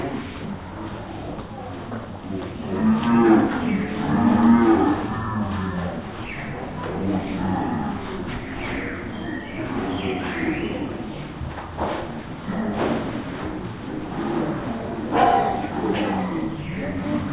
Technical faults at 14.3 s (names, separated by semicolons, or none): wrong sample rate